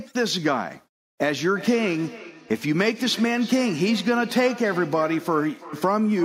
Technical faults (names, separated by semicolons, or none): feedback echo between two devices